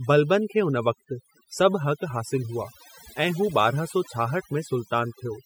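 From start to finish you can hear overdone noise removal on the speech. The reducer was pushed hard enough to clamp down individual frequency bands near its noise estimate, so the background drops and breaks up into twinkly specks.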